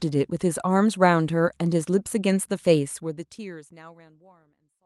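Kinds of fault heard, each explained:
No technical faults are audible in this speech; the level tapers off smoothly toward the end, and the call-codec coding leaves the upper frequencies limited to about 12 kHz.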